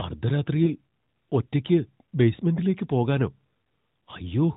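A lost AMR speech frame occurs at 0.64 s, running to about 0.69 s. A single 20 ms frame failed its integrity check after a transmission error, so the decoder filled the gap by reusing the previous frame's pitch and vocal tract settings at reduced gain. The result is a brief dip in the speech, followed by a moment of weaker or rougher sound as decoding recovers. The surrounding audio carries the AMR narrowband codec's sound, with nothing above 4 kHz.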